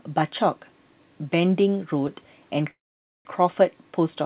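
Call audio freeze, 2.71 to 3.27 s: speech halts into a brief fading fill then silence, likely late packets draining the jitter buffer; nothing is lost.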